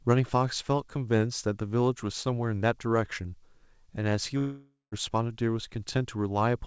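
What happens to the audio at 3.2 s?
Nothing goes wrong at 3.2 s: the speech there passes through the call path intact, with only the usual band limit at about 8 kHz of a wideband call codec.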